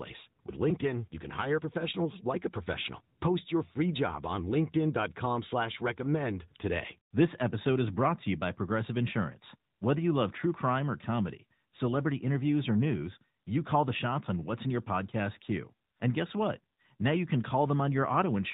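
The speech in this clip has been carried through an AMR narrowband mobile codec from start to finish, the AMR-NB speech coder of 2G and 3G phone networks, and its damage is plainly audible. The signal was reduced to 8 kHz sampling, so everything above 4 kHz is gone and the sound is boxed-in and dull. The voice was rebuilt from a vocal-tract model excited by sparse pulses, leaving a buzzy, synthetic edge that points to a mid-range mode of roughly 10 kbps.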